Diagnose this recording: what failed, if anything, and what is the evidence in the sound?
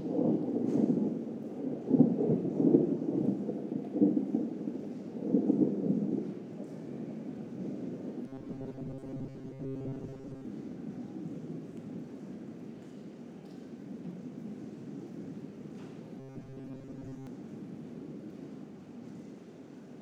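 A rigid 134 Hz buzz at 8.28–10.46 s and 16.20–17.27 s: robotic sound from repeated short buffers, likely a starved buffer looping 7.5 ms chunks.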